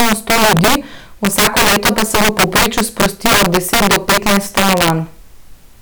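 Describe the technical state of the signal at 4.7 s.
At 4.7 s the speech is still affected by integer overflow, which runs through the whole clip. Somewhere in the chain the gain pushes peaks about 13 dB past the largest value the integer format can hold, and instead of being limited those samples wrap around to the opposite extreme. A small share of samples, around one in fifteen, cross that limit, so every loud peak flips across the full range and produces violent, sharp cracks, far harsher than ordinary clipping.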